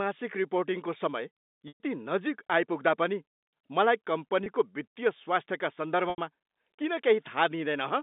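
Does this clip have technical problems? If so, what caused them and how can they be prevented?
Yes. Packet loss with pitch repetition occurs at 1.68 s for 120 ms, after "रिपोर्टिङको समय"; at 4.44 s for 20 ms, after "आइपुग्दा पनि मलाई"; and at 6.1 s for 80 ms. Each time, the receiver loops the last pitch period to cover the missing audio and fades it out over about 50 ms. The 20 ms gap sounds like a briefly held, buzzy tone. The two longer gaps fade to silence before the sound cross-fades back in. The telephone-band G.711 sound, limited to roughly 200 Hz to 3.7 kHz, comes from the line itself and is not part of this fault. To prevent these dropouts, give the call a stable network path with enough jitter buffering, or use forward error correction so that lost packets can be recovered instead of concealed.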